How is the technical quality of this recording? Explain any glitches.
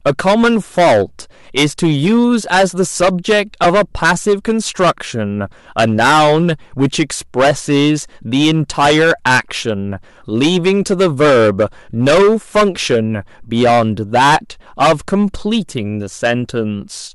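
The recording has poor technical quality: it is heavily distorted throughout, with one brief dropout.

Hard clipping runs the whole length. The signal is driven about 18 dB past full scale, and roughly a tenth of samples are cut flat, so the speech is harshly fuzzy. Waveform peaks show flat tops, and the spectrogram shows harmonics spread high.

Lost LE Audio frames occur at 3.64 s: a 10 ms gap, consistent with one frame. The decoder repeated the last spectrum with scrambled phase, giving a short noisy smear. It appears as a brief blurred patch on the spectrogram.

The light grainy upper edge, likely from Bluetooth LC3 compression, is faintly audible.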